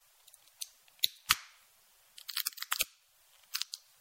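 The encoder likely ran short of bits under MP3 compression for the whole clip, with the damage plainly audible and pointing to a low bitrate of about 64 kbps. Starved of bits, it discards the weaker frequency lines, so quiet detail flickers in and out between frames. The result is a watery, swirling texture over the sound, with sharp onsets smeared rather than crisp.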